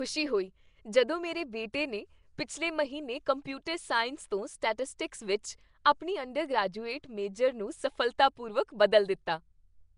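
From start to finish the speech carries a rough, hissy halo and a smeared, underwater quality, and nothing comes through above about 10.6 kHz. That's likely Nellymoser compression, the old Flash microphone codec, and the damage is plainly audible. It spends a fixed, small bit budget on short blocks, so weaker bands get no bits and are filled in with noise, which is where the hiss and smear come from. The sound points to a rate of around 44 kbps.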